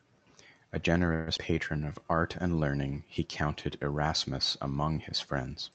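At 1.13 s the speech stalls for about 136 ms, to 1.29 s, and the last sound is held as a fading buzz or hiss rather than dropping to silence. This call audio freeze was likely packets held up in transit draining the jitter buffer. Unlike a dropout, nothing is lost: the speech resumes exactly where it stopped, just later.

Right after, at 1.37 s, comes a skip ahead. Roughly 70 ms of speech is thrown away, dropped in transit or by the jitter buffer when it overflowed. The two sides are butted together with no gap, so part of a sound goes missing instead of being stretched or paused.

From 1.79 to 2.05 s a jitter buffer slow-down adds 60 ms by repeating single pitch periods, so this stretch plays at about 81% speed. Sounds are drawn out, but the pitch stays put, unlike a tape-style slowdown that would also lower it.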